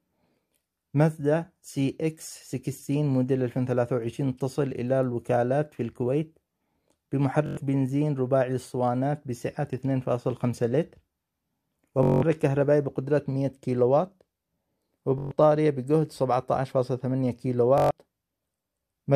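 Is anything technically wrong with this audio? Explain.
Yes. The audio has Bluetooth stutter at four points: 7.46 to 7.57 s, 12.03 to 12.23 s, 15.18 to 15.31 s and 17.78 to 17.91 s. At each point, data on the wireless link arrived late or not at all, so the receiver kept replaying its last short buffer. The result is a rapid buzzing repeat of a tiny slice of sound. Playback then resumes about 107, 192, 128 and 128 ms further on, skipping the material in between.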